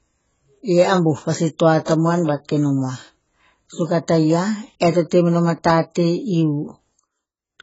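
Speech, with AAC compression damage throughout. Nothing is heard above 7.7 kHz, so the sound is dull. Sibilants fizz and sustained sounds warble. The likely cause is heavy AAC-LC coding, which fits a rate near 16 kbps.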